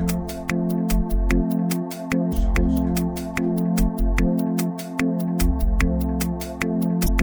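At 2.31 s and again at 7.04–7.09 s there's damaged data in the compressed stream: the decoder misreads the corrupted frames, loses sync, and spits out a brief glitch.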